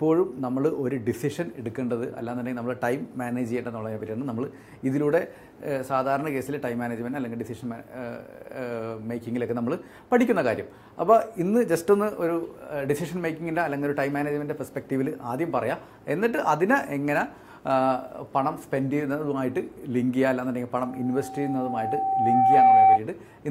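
A loudspeaker feedback squeal enters near the end of the audio, from 20.82 s to 23.00 s. A single tone at 774 Hz swells over roughly two seconds until it sits around 10 dB above the program sound. The microphone is picking up the loudspeaker it feeds, and at 774 Hz the loop gain exceeds unity, so that frequency reinforces itself on every pass. The squeal stops at 23.00 s, which points to the loop being broken or the gain being pulled down.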